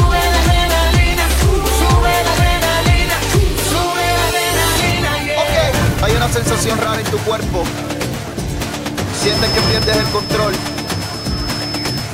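From 9.09 s onward, a feedback whistle at 5.2 kHz sits roughly 10 dB under the sound, likely from a loudspeaker-microphone loop held near instability.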